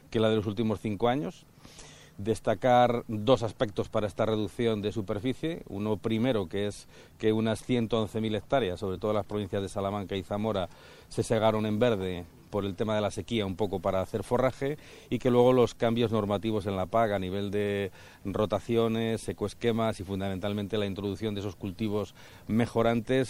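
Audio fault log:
Throughout: MP3 compression damage, plainly audible across the whole clip. Quiet detail swirls and warbles, taking on a watery, bubbling texture. Bright, noisy sounds break into metallic chirps, and sharp attacks smear. The likely cause is an MP3 encoder starved of bits, which fits a rate near 64 kbps. It switches weak frequency lines on and off between frames.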